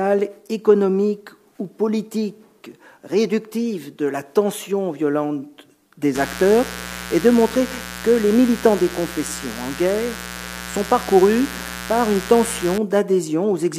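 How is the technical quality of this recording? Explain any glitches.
The recording has one clear fault: mains buzz from about 6.15 s to 12.78 s. Interference from a dimmer, rectifier or poorly shielded cable lets sharp switching spikes into the signal path twice per cycle of the 60 Hz mains supply. Those spikes carry a long series of 60 Hz harmonics reaching into the kilohertz range. The result is a steady, raspy buzz, roughly 15 dB below the main sound, that sits underneath everything for that stretch and then stops.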